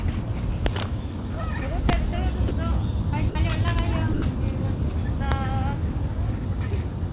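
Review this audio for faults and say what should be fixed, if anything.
Integer overflow at 0.66 to 0.82 s, 1.89 to 1.94 s, 3.68 to 3.79 s and 5.32 s: loud peaks exceed the integer range, by about 4 dB in the first two and about 1 dB in the last two, and wrap to the opposite sign, producing harsh cracks far sharper than clipping. Saturating arithmetic or a limiter before the integer conversion would prevent this.

Sound dropped by the voice detector at 2.48 to 2.51 s, 3.29 to 3.35 s and 4.13 to 4.22 s: brief stretches of 30, 60 and 90 ms give way to steady comfort noise. This is likely the sender's detector treating the non-speech sounds as background and pausing transmission. Disabling voice activity detection, or tuning it for non-speech audio, would keep these passages intact.

The band-limiting to 4 kHz matches the G.711 A-law call path and is expected.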